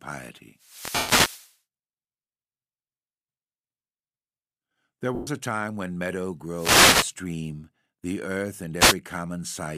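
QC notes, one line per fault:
0.57–1.58 s, 6.51–7.15 s, 8.78–8.95 s: wireless microphone noise hit, bursts of static and swish as the FM radio signal fades and receiver noise rises over the speech.
0.96–1.09 s, 5.15–5.27 s: lost LE Audio frames, gaps of 130 ms and 120 ms where the decoder repeats the last spectrum, giving a noisy smear that fits a run of 10 ms frames.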